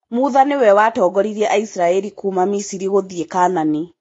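Speech throughout this clip sounds dull, with nothing above about 7.7 kHz and two layers of compression artefacts heard together. The likely cause is transcoding between lossy codecs, which fits a low-bitrate AAC-LC encode re-encoded to Vorbis at a similarly low rate.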